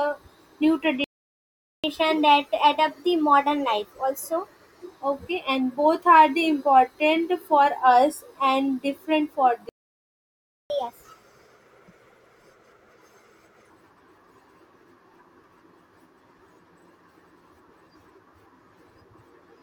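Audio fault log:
1.04–1.84 s and 9.69–10.70 s: playback stall. The speech cuts out mid-flow, first for about 0.8 s and then for about 1.0 s, likely because the player ran dry or its thread was blocked. The waveform shows a flat gap and the spectrogram an empty band.
1.84–4.84 s and 10.70–13.70 s: catch-up at higher speed. After each gap the backlog plays fast, at 1.1× and then 1.25×, raising pitch by roughly one and a half and then four semitones. The spectrogram shows harmonics shifted upward, and the waveform shows compressed cycles.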